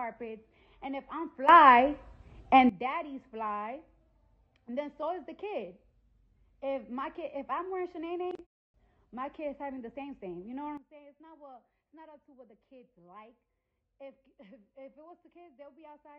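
At 1.49 s the whole signal, background noise included, leaps up by about 16 dB and drops back at 2.69 s; at 10.77 s it falls by about 15 dB and stays low to the end. These sudden gain jumps are likely unramped digital gain changes applied between consecutive samples.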